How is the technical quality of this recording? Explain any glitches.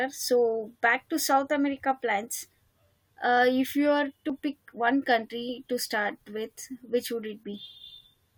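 The speech has one glitch. At 4.30 s, between "if you are" and "pick one country to", an overlap between stream segments made the player drop about 10 ms of real audio, producing a tiny skip where the waveform jumps.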